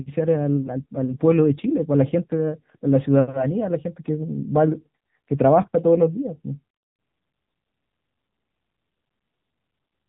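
From start to finish the speech carries the AMR narrowband mobile codec sound. Everything above 4 kHz is missing, consistent with 8 kHz sampling, so sibilants are dull and the sound is boxy. The codec models the vocal tract and drives it with a few pulses per short subframe, and at this quality the voice comes out plainly buzzy and synthetic. That degree of damage fits a low AMR-NB mode near 8 kbps.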